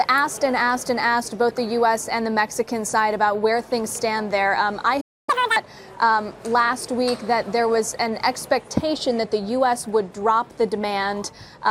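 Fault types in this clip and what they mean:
corrupt frame decoded: A single compressed frame arrived with flipped bits and the decoder played it anyway, so misread codes and gains scattered energy into the wrong frequencies. Around 1.50 s this comes through as a brief glitch lasting roughly one frame.
playback stall: The player most likely ran short of data or had its thread held up, leaving nothing to output. At 5.00 s the sound cuts off mid-flow and stays silent for about 0.27 s before picking up again.
catch-up at higher speed: Once the stall clears, the player resamples its backlog to recover the lost time, running it at 2× speed from 5.29 to 5.56 s. Pitch jumps by about ten semitones over that stretch.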